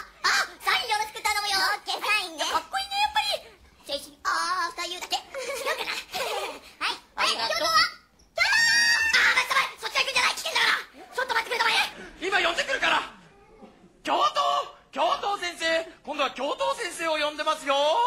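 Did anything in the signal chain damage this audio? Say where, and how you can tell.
Yes. The first 11.93 s plays back at the wrong speed, 1.37 times too fast. Pitch rises by about five semitones along with the tempo, then drops to normal. This is likely a playback or editing stage running on the wrong clock.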